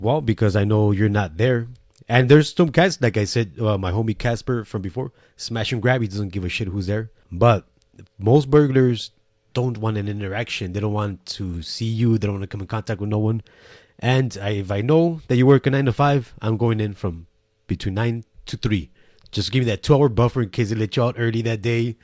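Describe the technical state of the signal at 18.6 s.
At 18.6 s the signal is intact, with no audible fault in the speech at that moment.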